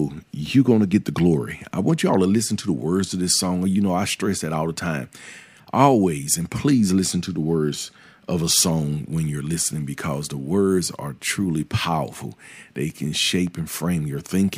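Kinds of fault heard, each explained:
No kinds of fault are heard in this clip.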